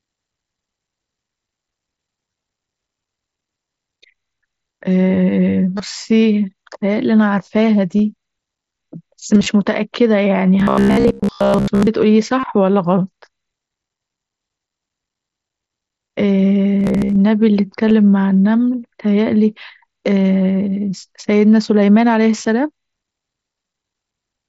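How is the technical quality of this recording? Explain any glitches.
The recording has two kinds of glitch: brief concealed dropouts scattered through the speech, and two stretches where the sound turns mechanical and buzzy. The audio comes through a Bluetooth headset on the mSBC wideband codec, which keeps speech up to about 8 kHz with slight graininess on louder sounds.

Concealed Bluetooth headset packet loss occurs at 2.31, 5.78, 7.98, 17.89 and 22.43 s, each about 15 ms and almost inaudible. It also occurs at 12.40 to 12.43 s (about 30 ms) and from 9.34 to 9.46 s, where about 60 ms of gaps are spread over 120 ms, the longest about 22.5 ms. The longer ones carry a held buzz at full level and a small warble as real audio resumes. Voice packets from the headset went missing, and the phone filled each gap by continuing the waveform from a closely matching piece of the audio just before it.

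Robotic sound from repeated short buffers affects 10.60 to 11.87 s and 16.80 to 17.16 s. The sound becomes a stiff, metallic drone at about 67 Hz that only loosely tracks the speech, because most of the real audio in those spans is replaced. The likely cause is that fresh audio arrived too slowly, so playback kept looping the last chunk of about 15 ms. That repetition rate sets the fixed buzz pitch.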